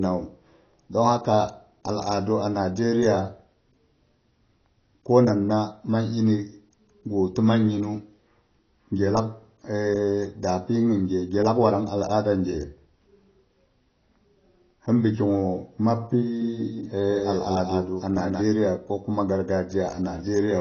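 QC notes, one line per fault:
throughout: AAC compression, likely at a low bitrate; plainly audible codec damage, nothing above 6.6 kHz, dull and smeared rather than simply filtered.
16.41–18.41 s: doubled audio track, full-band copy about 5 dB quieter, around a fifth of a second late, starting and stopping abruptly, with no decay or room colour, unlike echo.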